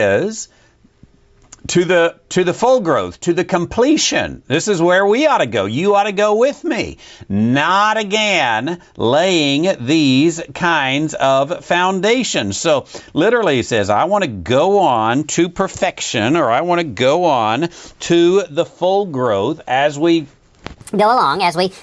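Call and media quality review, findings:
Wrong sample rate, 20.82 to 21.83 s: sound runs 1.38x fast and about 5.6 semitones high, fitting 16 kHz material played at 22 kHz. Speed and pitch rise together, unlike pitch-shifting.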